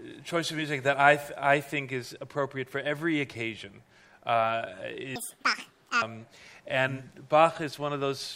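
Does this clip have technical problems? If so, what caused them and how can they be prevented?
Yes. From 5.16 to 6.02 s, the audio was read two samples at a time (double speed). The reader took each pair of samples as one frame, as though it expected two channels or samples twice as wide. As a result, that stretch plays twice as fast and a full octave (12 semitones) higher. To prevent it, make sure the reader's channel count and sample width match the format the audio was actually written in.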